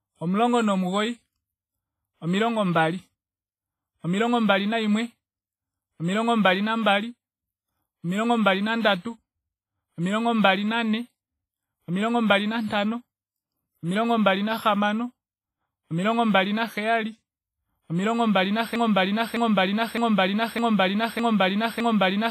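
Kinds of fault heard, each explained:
WMA compression: Speech rings and sounds washy, with hiss that swells and fades with the signal and nothing above 15.4 kHz. The heavy damage fits a low bitrate near 24 kbps, likely from WMA. The smearing spreads over tens of milliseconds.
Broken-record loop: From 18.76 s to the end, a 0.61 s piece of speech repeats exactly, back to back, six times. The stream likely stalled and kept resending its last fragment, losing the audio meant for that span. Unlike echo, the copies are identical and do not decay.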